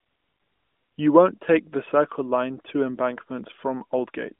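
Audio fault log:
No fault is found in this audio.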